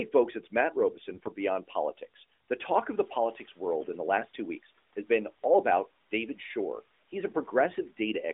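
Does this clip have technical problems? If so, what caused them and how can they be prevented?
Yes. From 2.95 to 3.55 s the noise suppressor is catching up: room noise jumps by about 11 dB around 3 s, and the suppressor's estimate takes 600 ms to adapt, so noise leaks through before sinking about 7 dB. On a spectrogram the broadband floor brightens, then fades. Faster-tracking noise estimation prevents it.

From 3.81 to 3.87 s, AMR bit errors from a weak link make the sound briefly hoarse and gargly. The span fits three corrupted 20 ms frames, with roughly a tenth of the less-protected bits flipped. Spectrograms show smeared, scratchy harmonics there. Stronger radio coverage or error protection prevents it.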